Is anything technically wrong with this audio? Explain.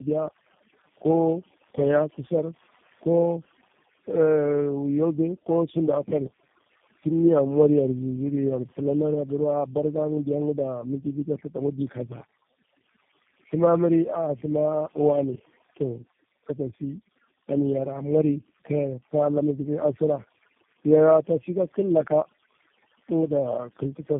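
Yes. Two faults run through the whole speech clip.

Overdone noise removal is present from start to finish. Over-aggressive suppression zeroes bands near the estimated noise floor, eating quiet speech detail. The background drops and breaks up into twinkling specks. A spectrogram shows isolated bright dots scattered across an otherwise empty floor.

Tandem speech coding is also present throughout. The sound points to about three low-rate speech codecs in a row, ending in something like G.729A, each re-encoding the previous one's damage. Speech comes out rough, muffled and warbly. A spectrogram shows nothing above 3.6 kHz and smeared, blurry harmonics.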